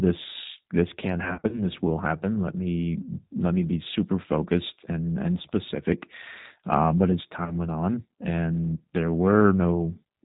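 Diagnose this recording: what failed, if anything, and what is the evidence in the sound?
Codec stage: throughout, the speech is band-limited to 4 kHz and sounds rough and synthetic, which fits an 8 kbit/s G.729 codec. This is steady, not the intermittent dropouts of loss.

Network stage: VoIP packet loss concealed by the speech codec, from 1.24 to 1.63 s after "this can" and at 7.45 to 7.55 s after "but as". The decoder stretches a buzzy tone or coloured noise that fades over each gap rather than leaving silence, and the voice stays weak or distorted afterwards.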